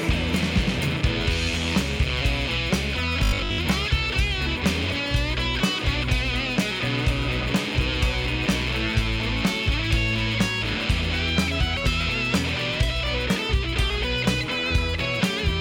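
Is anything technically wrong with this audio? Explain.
Yes. Robotic sound from repeated short buffers from 3.24 to 3.58 s. Audio likely arrived too slowly, so playback looped a roughly 20 ms slice over most of that stretch, skipping the real sound and imposing a rigid, metallic 50 Hz buzz.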